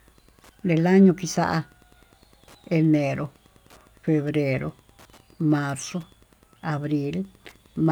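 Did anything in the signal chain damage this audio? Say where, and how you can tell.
Yes. Wi-Fi interference runs throughout the speech in the analogue wiring stage: a steady tick repeating every 102.4 ms, just under ten times a second, sitting roughly 35 dB below the speech and easiest to hear in pauses. That strict regular spacing matches a Wi-Fi beacon. A radio near the analogue circuit induced its bursts, and the circuit rectified them into audible clicks before conversion.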